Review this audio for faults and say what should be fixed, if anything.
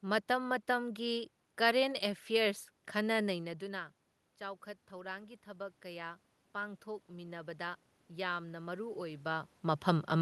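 Automatic gain rising from 3.32 s to 9.53 s: the talker moves away around 3.5 s, the input falls by about 14 dB, and the gain control slowly adds about 9 dB. The waveform envelope swells gradually, and the spectrogram's noise floor brightens along with the speech. To prevent it, keep the talker at a steady distance from the microphone, or slow and cap the automatic gain so it cannot lift room noise this far.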